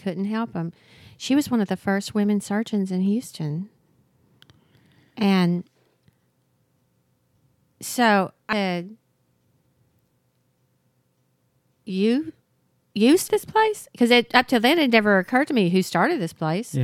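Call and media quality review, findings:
Audio missing between chunks: abrupt skips at 3.78, 8.53 and 13.28 s, about a third of a second lost each. Likely 5 s chunk handover. Waveform shows hard splices, no silent gap.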